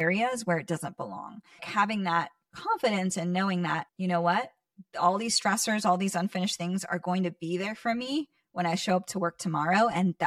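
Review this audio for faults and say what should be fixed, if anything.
The speech has channel delay (comb filtering) from start to finish. One channel arrives around 5 ms late, and when the two are folded to mono the shared content cancels at evenly spaced frequencies starting near 100 Hz. That leaves the voice hollow and phasey. To prevent it, time-align both channels before summing, or just take a single channel.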